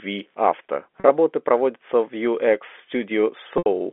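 At 1.0 s there is packet loss with pitch repetition. About 40 ms of audio is missing, which fits two 20 ms packets. The receiver repeats the last pitch period to fill the gap. The sound holds briefly with a buzzy tone, then "проводятся в" follows. At 3.58 s a longer loss of 80 ms occurs, which fits four packets. Here the repeated period fades out over about 50 ms into silence. The sound then returns through a short cross-fade.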